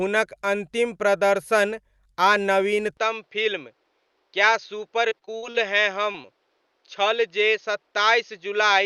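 Speech that turns duller and slightly quieter from 2.97 s to the end, with no gap at the change: nothing above 6.6 kHz survives, the level drops by roughly 5 dB, and a new noise floor sits around 45 dB below the voice. The likely cause is the input switched to a poorer device, a narrower-band microphone with its own tone and hiss. From 5.09 to 5.56 s the sound turns choppy and robotic. This is repeated packet loss, with half a dozen holes of up to 49 ms each, about a third of that stretch. The receiver patched each hole by extending the preceding sound, so pieces go missing. At 6.12 and 6.22 s there are brief smears. These are short concealed packet losses, each hiding about 20 ms of missing audio, filled in from the preceding sound and blended back into the real signal.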